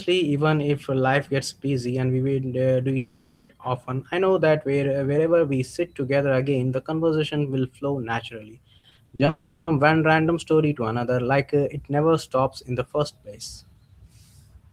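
It's a speech clip. From 2.97 to 3.51 s, and again from 9.29 to 9.69 s just before "one random story to", the sound smears into a fading buzz, likely a long network dropout with the missing stretch never coming back. Right after "conversation will flow naturally", 8.79 to 9.29 s turns choppy and robotic, classic repeated packet loss: several short holes, none over 40 ms, patched with about a third of that half-second filled in.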